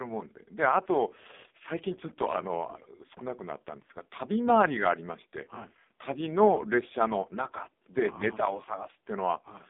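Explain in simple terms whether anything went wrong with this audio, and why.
Yes, something went wrong, and it lasts the whole clip. The speech sounds thin, muffled and buzzy, with a robotic, synthetic edge, as if heard over an old mobile phone call. That is the AMR narrowband mobile codec at a very low setting. It keeps only a narrow slice of sound, nothing above about 3.7 kHz, and rebuilds the voice from a simple model rather than storing it faithfully, so heavy damage like this is easy to hear.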